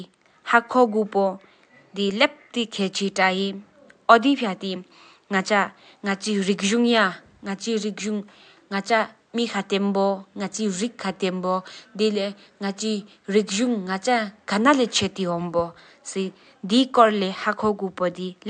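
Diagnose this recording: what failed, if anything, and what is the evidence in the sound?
Nothing's gone wrong anywhere along the chain here, and the only thing under the speech is the room's own background noise, sitting about 48 dB down, which belongs to the recording itself rather than to any stage of the system.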